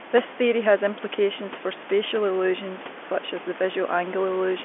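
No faults are audible: the room noise sits about 14 dB under the speech, and the band is the ordinary telephone line from roughly 250 Hz to 3.4 kHz, with nothing above 3.6 kHz, which fits 64 kbps G.711 A-law coding.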